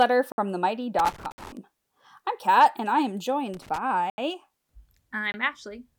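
Four times in this speech recording, the playback chain failed to deliver samples in time, and whole blocks were written out as zeros. The result is blocks of digital silence at 0.32–0.38 s (60 ms), 1.32–1.38 s (60 ms), 4.10–4.18 s (80 ms) and 5.32–5.34 s (20 ms). Each cuts abruptly to dead silence and back with no fade. They are heard as short holes. Separately, a worn or dirty contact somewhere in the signal path was making and breaking as it moved, producing loose connector crackle from 0.99 to 1.57 s and again from 3.54 to 3.78 s. The signal is chopped rapidly and irregularly in those spans, giving a scratchy, crackling burst laid over the speech. The first burst is long enough to surround the 1.32 s dropout.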